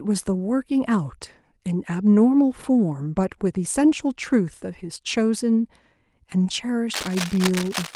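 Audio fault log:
6.93–7.96 s, cable scratch noise: a dense, ragged scratching and rustling rides over the speech to the end of the clip, sitting roughly 10 dB below it. The likely cause is a worn cable or connector being moved so its contact resistance jumps rapidly. On a waveform it shows as irregular spiky bursts added to the speech envelope; on a spectrogram, as broadband vertical streaks scattered unevenly across the band through that final second.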